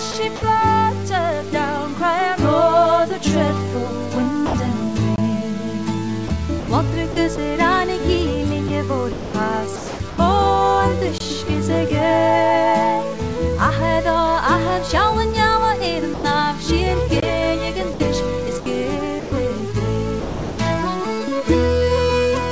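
Low bit depth without dither runs through the whole clip. Quiet passages turn gritty and grainy, with a rough distortion that tracks the sound rather than sitting under it as steady hiss, and the faintest moments sputter or collapse toward silence. The error sits roughly 25 dB below the signal, which fits about 6 bits. The likely cause is samples truncated to that coarse grid with no dither, so the error stays tied to the waveform. This happens on top of the call codec's band limit, which leaves nothing above 8 kHz.

Sound chopped by the voice detector appears first from 0.12 to 0.42 s. The sound breaks up, with about 80 ms of it replaced by smooth synthetic noise. This is likely a sender-side voice detector switching off and on repeatedly, with comfort noise filling the holes. The same choppy pattern returns from 6.28 to 7.38 s with 160 ms replaced, from 8.68 to 10.18 s with 560 ms replaced, and from 17.94 to 19.32 s with 240 ms replaced.

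Sound dropped by the voice detector occurs at 4.46 to 4.54 s, where 80 ms of sound vanishes into steady noise before the audio resumes. It recurs at 16.14 to 16.24 s for 100 ms, and at 20.20 to 20.58 s for 380 ms. In each case the detector likely took the sound for background and stopped sending, and comfort noise played in its place.

A gap between chunks cuts in at 5.16 s, 11.18 s and 17.20 s. Each is a hard-edged hole of about 21 ms, spaced 6 s apart. The audio was handled in 6 s pieces, and a short stretch of silence is inserted at each join, so nothing is lost, but the flow is interrupted.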